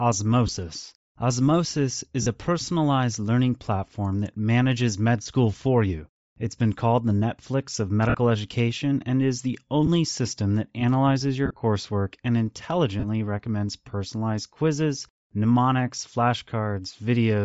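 Throughout the speech, a low-rate transform codec strips and noise-fills the upper spectrum, most likely Bluetooth LC3 compression at a setting that fits 32 kbps with 7.5 ms frames. The result is a plainly audible breathy, grainy edge on the voice.

Lost LE Audio frames force the decoder to reuse the previous spectrum with scrambled signs, turning the sound into brief noisy smears. They occur at 0.47 s, 2.22–2.26 s, 5.22–5.26 s, 8.09–8.15 s and 9.86–9.89 s. At 11.46–11.60 s the gaps are scattered over 135 ms, the longest about 30 ms. The last is at 13.00–13.05 s.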